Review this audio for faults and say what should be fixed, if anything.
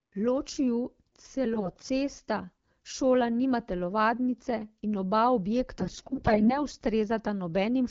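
AMR bit errors at 1.54–1.90 s and, more severely, 5.79–6.58 s: corrupted lower-priority frame bits misplace excitation pulses and skew gain and spectrum, making speech hoarse and gargly. Fix the weak radio link or strengthen channel coding so fewer AMR-WB frame bits arrive flipped.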